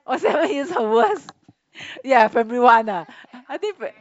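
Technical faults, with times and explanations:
Nothing in this speech recording can be heard as a technical fault. There are no times or causes to report.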